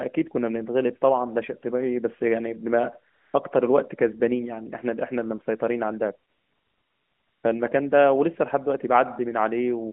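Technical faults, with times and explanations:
3.14–3.34 s and 6.30–7.44 s: AMR comfort noise. The sending phone judged the talker silent and stopped transmitting speech frames, for 0.2 s and then 1.14 s, and the receiver filled each gap with synthetic noise built from a rough estimate of the background's level and spectral shape. The real background sound gives way to a smooth, steady hiss that switches in and out at the gap edges, between the lightly coded narrowband speech (200 Hz to 3.4 kHz, consistent with AMR-NB at 12.2 kbps) on either side.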